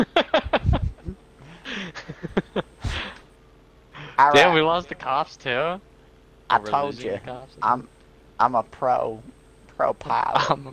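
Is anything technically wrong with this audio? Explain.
No, nothing technically wrong stood out on listening to this audio.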